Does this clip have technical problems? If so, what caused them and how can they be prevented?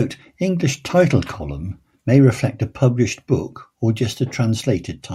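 No, this clip has no technical problems to report.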